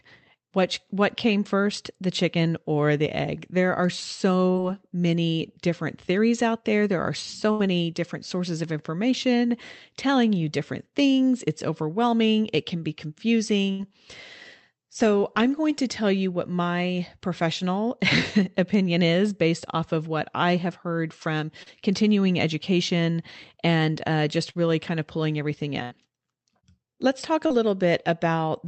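Speech over what sounds like an Opus call, band-limited at about 8 kHz, and it's got two kinds of dropout. There's short concealed packet loss at 4.51–4.58, 21.63–21.69, 24.50–24.58 and 27.47–27.53 s: about 40 ms went missing each time, and the decoder papered over it by extending the previous sound, so you get a quick smear or wobble. Then there's a burst of packet loss at 7.51–7.62, 13.71–13.82 and 25.83–25.94 s, where roughly 80 ms vanished. The concealment stretches the last sound into a fading buzz or hiss, and the audio picks up further along with that chunk simply gone.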